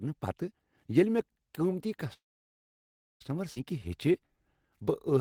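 At 2.13 s the speech stops in a call audio freeze lasting until 3.22 s. The last sound trails off briefly, then about 1 second of silence follows. Packets were likely held up in transit, emptying the jitter buffer. The speech resumes where it stopped, with nothing lost.

From 3.54 to 3.58 s there is a skip ahead. Roughly 0.7 s of speech is dropped, and the two sides are joined by a fill of only 17 ms. Playback jumps forward abruptly. The audio was dropped on the way or by the jitter buffer when it overflowed.

From 3.73 to 5.19 s a jitter buffer slow-down follows. The buffer was rebuilding its reserve, so single pitch periods and pause fragments were repeated. This adds 121 ms, and the speech plays at 92% speed. Sounds are drawn out at unchanged pitch.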